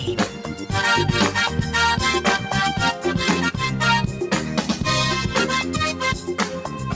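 A noise suppressor applied to music or sounds runs through the whole clip. It was built for speech, so it treats held tones, ambience and decaying tails as noise and turns them down while attacks pass through. The level swings by roughly 5 dB, and the sound pumps and thins.

Sound cut by the noise suppressor occurs from 0.28 to 0.67 s, dipping by about 6 dB, and again from 6.53 to 6.82 s, dipping by about 5 dB. In both spans the suppressor judged the sound to be noise, so it sinks below its surroundings.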